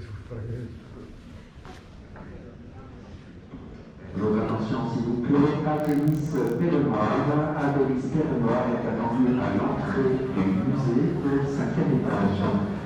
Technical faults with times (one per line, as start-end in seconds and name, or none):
5.73-6.65 block size mismatch (padded)